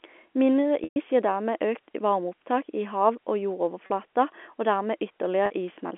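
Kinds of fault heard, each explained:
Packet loss with pitch repetition: audio goes missing and the receiver loops the last pitch period, fading it down. The 120 ms gap at 0.84 s holds as a buzzy tone that sinks to silence before the sound cross-fades back. The 40 ms gaps at 3.86 and 5.46 s are brief held buzzes. A spectrogram shows the harmonics frozen into flat bands, and the waveform shows identical cycles repeating under a decaying envelope.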